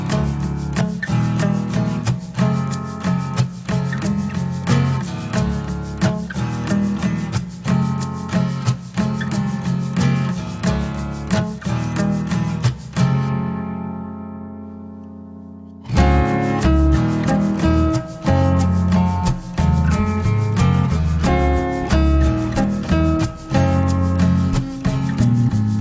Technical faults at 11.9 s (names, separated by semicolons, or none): wrong sample rate